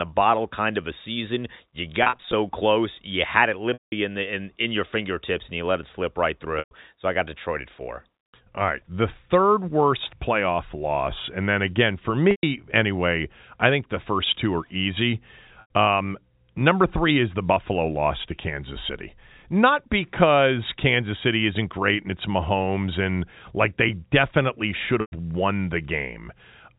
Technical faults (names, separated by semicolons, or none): packet loss with pitch repetition